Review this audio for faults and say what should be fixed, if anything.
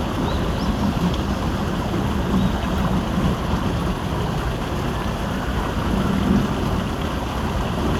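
Nothing to fix: no faults are audible anywhere in the recording.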